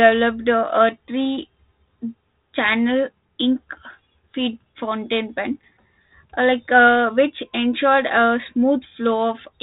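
No technical faults are audible.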